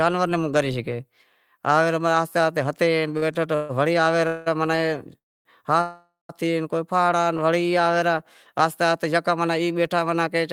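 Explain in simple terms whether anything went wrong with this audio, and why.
Twice the speech briefly sticks, a short stall from a late packet: at 3.17 to 3.24 s a sound is held about 45 ms too long, and at 4.76 s for about 19 ms. A piece of audio arrived late, so the last sound was stretched until it came. Nothing is lost.

Four longer hold-ups are call audio freezes: 3.55 to 3.71 s, 4.27 to 4.48 s, 5.18 to 5.47 s, and 5.81 to 6.31 s, lasting from 140 to 480 ms. Unlike the stalls, the held sound fades as a buzz or hiss, and it is nearly all silent in the third and ends in silence in the last. The speech then resumes where it stopped, likely because the connection held data up for a moment.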